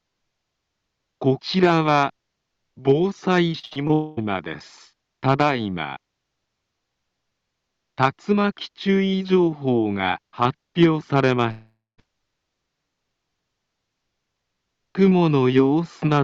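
From 3.59 to 3.91 s the sound turns choppy and robotic, with four short holes, the longest 58 ms, smoothed over by repeating what came just before. This is repeated packet loss: 43% of that stretch is patched rather than received.

Right after, from 3.93 to 4.19 s, the audio becomes a smeared, fading continuation of the last sound for about 0.24 s with no silence, likely a long network dropout. At 11.51 to 12.00 s the same buzzy fade runs out into about 0.16 s of silence before the audio resumes, with roughly half a second missing.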